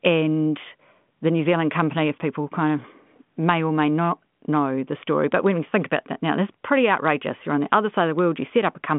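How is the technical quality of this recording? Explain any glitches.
No glitches turn up anywhere in this recording. It passes through a G.726 ADPCM telephone link at 40 kbit/s, which confines the sound to a band of about 150 Hz to 3.5 kHz with nothing above 3.8 kHz, and any hiss from the coding is faint at most.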